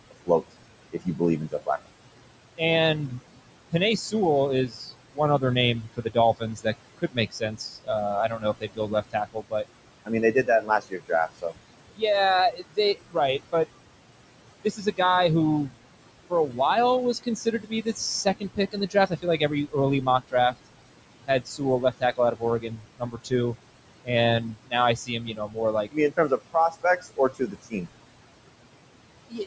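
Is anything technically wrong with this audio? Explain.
Yes. Noise suppressor artifacts run through the whole clip. The suppressor pulls the room noise down by about 21 dB, frame by frame, so the background sinks between words and rises under them instead of sitting as a steady hiss.

Speech cut by the noise suppressor occurs within 0.11–4.14 s, 4.68–13.66 s, 14.64–14.99 s, 16.3–16.6 s, 17.14–20.67 s, 21.27–27.9 s and 29.3–29.46 s. The deepest drops are about 13 to 22 dB. The suppressor mistakes soft speech for noise, so quiet consonants and endings turn faint and swallowed, adding up to roughly three seconds in each of the longest spans. Unlike a network dropout, the sound fades rather than breaking off abruptly, and the background sinks along with it.

The steady room noise, about 13 dB below the speech, belongs to the recording. The absence of content above 8 kHz is the call microphone processing's normal bandwidth.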